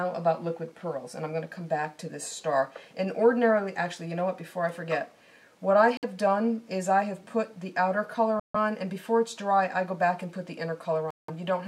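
The sound drops out completely three times. The first gap runs from 5.97 to 6.04 s, with about 56 ms of silence. The second runs from 8.40 to 8.56 s, with 149 ms of silence. The third runs from 11.11 to 11.30 s, with 179 ms of silence. Each time the audio stops dead and then resumes. These are likely Bluetooth stalls. Radio interference delays packets, the headphone buffer empties, and playback halts until the retransmitted data arrives.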